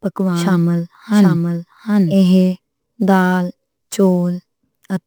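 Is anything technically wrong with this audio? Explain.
Yes, there are two faults.

Sample clock jitter runs through the whole speech clip. The converter's clock wanders by around 10 microseconds, so steep, fast-changing parts of the waveform are sampled with the largest errors. The result is a roughness about 30 dB below the signal. On a spectrogram it shows as a broadband haze that swells with loud, bright syllables and disappears in pauses.

A doubled audio track is already present when the clip begins and lasts until 2.14 s. A full-band copy about 5 dB quieter trails the original by roughly 700 ms, likely from a second, slower capture path. It sounds dry, with no room tail. The waveform shows each envelope repeated, and the copy cuts off abruptly at 2.14 s.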